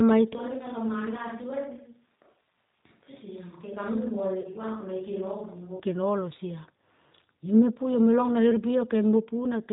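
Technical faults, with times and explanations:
Throughout: G.729 codec. The speech has been passed through a low-rate CELP coder, and the damage is plainly audible. Nothing above 4 kHz survives, so the sound is band-limited and dull. The rough, slightly synthetic texture comes from rebuilding each 10 ms frame from a vocal tract filter, a pitch predictor and a handful of coded pulses rather than the actual waveform. The character fits the G.729A variant running at 8 kbit/s.
4.41 to 4.48 s: VoIP packet loss concealed by the speech codec. About 30 ms of signal goes missing, which matches a run of three lost 10 ms frames. The decoder fills the gap by carrying its last pitch and filter forward at steadily falling gain, so the speech smears into a brief buzzy tone or coloured noise that fades. Each frame is predicted from the one before, so the speech just after the gap stays weak or distorted until the decoder's state recovers.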